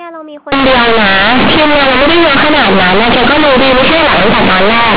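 From 0.52 s to the end, companded audio read as linear: A-law bytes play as raw 8-bit samples, giving harsh buzzing distortion, a waveform swinging over about half its range at each sign change, and broadband noise filling pauses.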